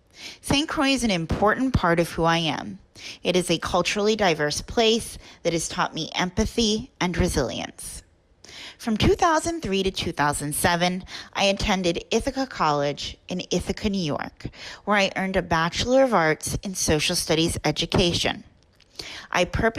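The audio has two short bursts of DAB burbling, from 10.56 to 10.65 s and from 19.07 to 19.25 s. Weak DAB reception let bit errors, at roughly a fifth of a percent, slip past the error correction into the MP2 audio data. Corrupted samples then put short noise blips into single sub-bands, spread across 8 and 11 audio frames respectively.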